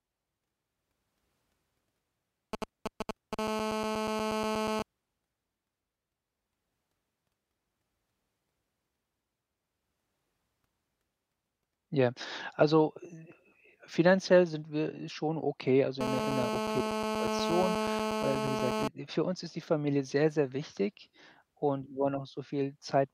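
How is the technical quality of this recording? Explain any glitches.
The recording has mobile-phone interference in two stretches, both from a 2G handset sitting close to the audio gear.

From 2.53 to 3.35 s you get GSM signalling bursts: a galloping dit-dit-dit of short 217 Hz buzzes, roughly as loud as the speech. That's a nearby phone talking to the network in brief groups of radio bursts, pulsed at about 217 Hz. Something in the audio circuit rectifies that RF, so each group turns into an audible buzz.

Right after, from 3.39 to 4.82 s, it settles into a steady GSM phone buzz, and it comes back from 16.01 to 18.88 s, starting after "wir schon okay also" and clearing before "äh für uns ist". This is a hard, raspy 217 Hz buzz full of harmonics, about 2 dB below the speech, so it's very prominent. It's the same rectified burst train, now continuous as in an active call, and it has nothing to do with the speech underneath.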